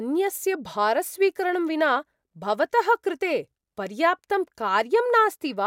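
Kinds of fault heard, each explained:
No technical faults are audible anywhere in the recording.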